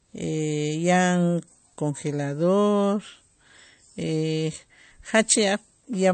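Throughout, the speech likely passed through MP3 compression at a low bitrate, one that fits roughly 40 kbps. Short of bits, the encoder discarded everything above 8.6 kHz and let weak frequency lines flicker between frames, leaving a dulled top and plainly audible watery swirl.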